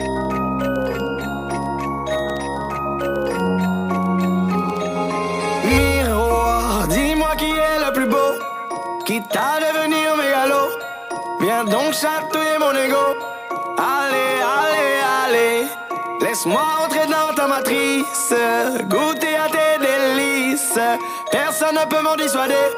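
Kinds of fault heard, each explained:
No kinds of fault are heard in this clip.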